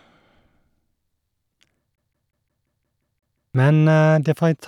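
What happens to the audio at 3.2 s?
At 3.2 s the speech is caught in a CD stuck on one turn, running from 1.96 to 3.55 s. A scratch keeps knocking the laser back to the same point, so one slice of about 0.18 s repeats nine times, each pass separated by a brief mute at the jump. Unlike a buffer underrun, which leaves gaps of silence or uneven hiccups, this is a fast, perfectly regular stutter of identical audio.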